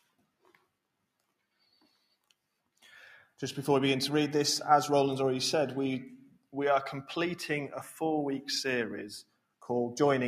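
A speech-oriented noise suppressor has been left running on non-speech audio. Throughout the clip it reads sustained tones, ambience and reverberant tails as noise and pulls them down, so the level swings by roughly 5 dB as the processing engages and releases. Transients pass largely intact while held material sinks between them, which gives the sound a pumping, fluttering or thinned character rather than a steady bed. The clearest cases of sound cut by the noise suppressor fall at 0.03–0.68 s, 1.6–2.32 s, 6.21–6.54 s and 9.23–9.64 s. In each window the suppressor clamps down harder than elsewhere, reaching about 16 dB, 15 dB, 18 dB and 18 dB of attenuation at the deepest point. Only part of each window is pulled down, around a fifth to a third of a second in total. Sustained or decaying content there sinks in level, or its tail is truncated instead of fading naturally.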